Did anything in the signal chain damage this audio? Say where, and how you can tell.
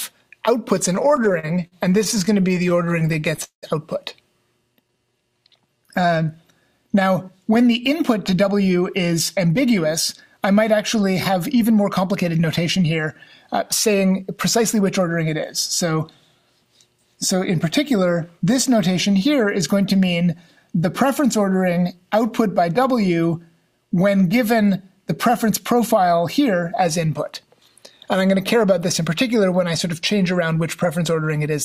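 Yes. Repeated stalls (stutter) at 0.95 to 3.65 s: 29 gaps are filled with held sound, the longest 191 ms. The jitter buffer kept running empty.

Jitter buffer slow-down at 4.75 to 6.26 s. Sound plays at 89% speed, same pitch. Repeated pitch periods add 177 ms to rebuild the buffer.

Jitter buffer speed-up at 7.91–13.07, 13.87–15.09, 25.30–25.95 and 30.31–30.97 s. Sound runs 5–8% fast at the same pitch. The buffer trims pitch periods to cut excess delay.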